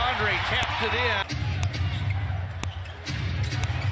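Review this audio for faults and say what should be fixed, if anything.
Four sharp clicks sit at 0.63, 1.63, 2.64 and 3.64 s, exactly 1.0 s apart, each only a couple of milliseconds long. This is a file header played as audio: the sound appears to have been assembled from 1-second WAV pieces, and each piece's header bytes were left in and decoded as sample values. That produces a loud snap at every join regardless of what the signal is doing. To prevent it, strip each header and concatenate only the data chunks, or write one continuous file.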